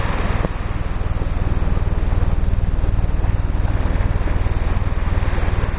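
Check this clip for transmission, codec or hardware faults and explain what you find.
No faults found.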